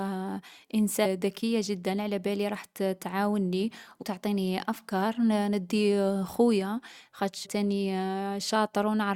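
Damaged data in a compressed stream occurs three times in this speech. Each time, corrupted bytes in the encoded file make the decoder misread its frames, lose sync and hunt for the next valid header. The result is a brief chirp or blip: at 1.04 s, again from 4.01 to 4.03 s just after "علابالي رح تعاوني", and a third time from 7.44 to 7.46 s.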